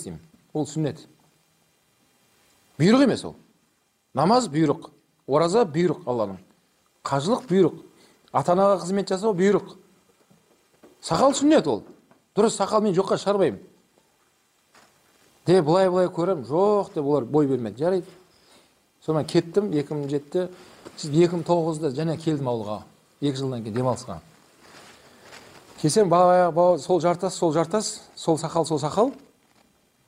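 No fault can be heard anywhere in the clip. The sound carries on steadily from its opening moment to its close, with nothing that breaks or disturbs it.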